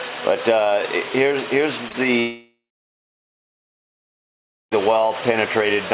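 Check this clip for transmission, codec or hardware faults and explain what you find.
Two kinds of transmission fault are present: a pair of short concealed packet losses and one long network dropout. The audio is band-limited to 4 kHz, which fits a narrowband call codec such as G.711 A-law.

Short concealed packet loss occurs at 1.88 to 1.92 s and again at 1.92 to 1.96 s. Each time about 20 ms failed to arrive, and the receiver extended the preceding sound before blending back. The result is a brief smear or wobble rather than a gap, which separates it from a dropout.

Long network dropout runs from 2.20 to 4.73 s. The sound first continues as a fading synthetic buzz or hiss, then drops to silence for about 2.1 s before the audio resumes. No audio arrived for roughly 2.5 s, so that stretch is lost. The likely cause is a network interruption. Its length and the silent stretch distinguish it from brief concealment.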